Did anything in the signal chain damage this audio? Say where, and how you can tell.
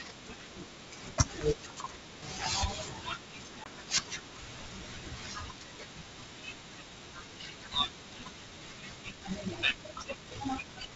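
Yes. At the network stage, there is packet loss on an ADPCM call at 3.64 to 3.67 s. About 20 ms, roughly one packet's worth, drops out to silence with hard edges. When the sound resumes, it comes back slightly distorted, then settles over the next few tens of milliseconds. The dropout alone does not explain that. The receiver's adaptive predictor and step size were left out of step with the sender's, so they had to reconverge.

From 9.0 s to the end, the pace abruptly jumps to about 1.53 times normal while the pitch stays where it was. That points to a time-stretched section, likely introduced in editing or playback processing that squeezed the audio to fit a length. To hold pitch, it discarded short segments, which leaves the sped-up stretch sounding rushed. The G.722 wideband coding underneath carries the sound with at most faint coding damage.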